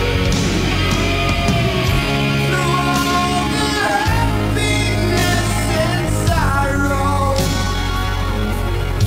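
A 60 Hz buzz with hash above it runs under the whole recording, sitting roughly 20 dB below the signal. It is video or display buzz, picked up from a screen or video cable at its 60 Hz field rate. From 1.81 s to the end, the audio suddenly slows to about 0.7 times its pace and drags while the pitch holds. This time-stretched section likely comes from software repeating short pieces to lengthen it without shifting pitch.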